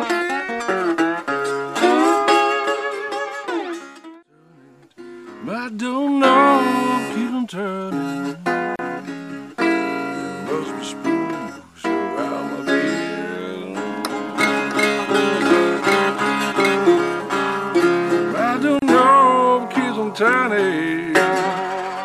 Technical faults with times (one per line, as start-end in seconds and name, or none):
8.76-8.79 gap at a join of encoded pieces
18.79-18.82 gap at a join of encoded pieces